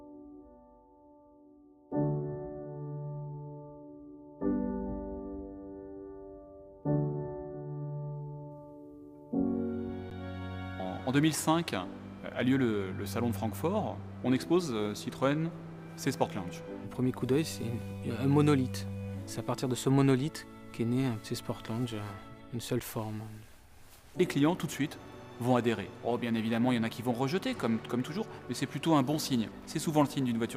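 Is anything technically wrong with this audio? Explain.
Yes. Underrun with held sample at 10.10 s and 22.80 s: the output buffer emptied, the converter froze on its last value for about 11 ms (512 samples), then resumed as roughly 10 ms of audio was lost.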